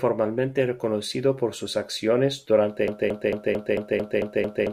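It's a speech clip, and right after "reconocido por sus acciones" at 2.88 s it falls into a broken-record loop: a 0.22 s fragment repeats eight times back to back until the end. Most likely the player or stream stalled and kept resending it, so whatever followed is lost.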